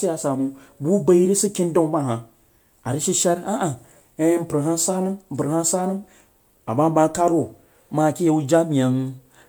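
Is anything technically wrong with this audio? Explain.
Yes. Throughout the speech there is generation loss: it has likely been passed through a lossy codec several times, in a chain that points to MP3 at around 128 kbit/s, probably about three rounds. Each decode and re-encode quantises on a shifted frame grid, so noise and spectral gaps pile up. The result sounds swirly, smeared and hollow, more than a single encode at that rate would, with consonant attacks blurred, though content still reaches about 20.1 kHz.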